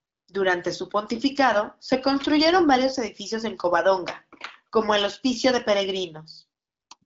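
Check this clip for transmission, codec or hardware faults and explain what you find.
No faults found: the speech carries the mild coding character of an AMR wideband (HD Voice) path running at a rate that fits 12.65 kbit/s, with nothing beyond that to report.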